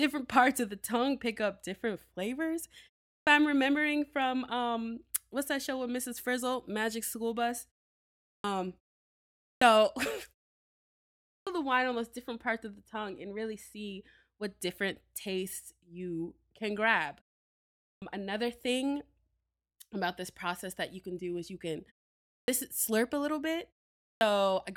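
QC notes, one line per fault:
3.11, 8.30, 9.46, 11.33, 17.88, 22.32, 24.07 s: clipped start after a pause. The output device wakes late after each 0.3 to 1.1 s gap, swallowing 140 to 160 ms. Speech resumes abruptly, first sounds missing. The waveform jumps from a flat line straight to full level, and the spectrogram's onset columns are blank.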